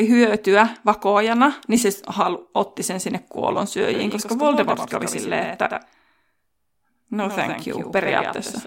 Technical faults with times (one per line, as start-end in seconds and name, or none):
3.94-8.67 doubled audio track